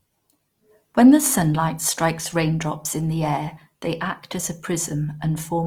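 A speech recording carrying Opus compression damage from start to finish, plainly audible as a rough, grainy texture rather than swirling or warbling. The likely cause is Opus in its music mode at a low rate, fitting roughly 24 kbps: band energies are kept but their fine detail is filled with folded or noise content. On a spectrogram the upper bands look smeared and noise-textured, with few holes, and everything stops near 20.4 kHz.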